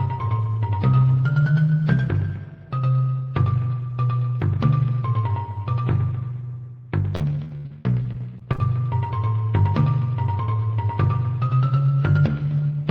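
Repeated packet loss from 7.15 to 8.6 s leaves more than a dozen holes, the longest 76 ms, patched by extending prior sound, so the audio turns choppy and robotic.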